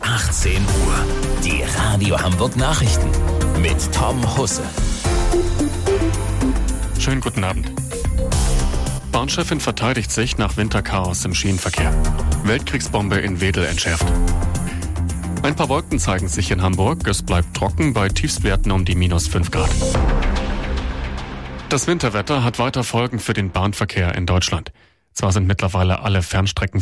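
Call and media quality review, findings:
No audible faults found; no action needed.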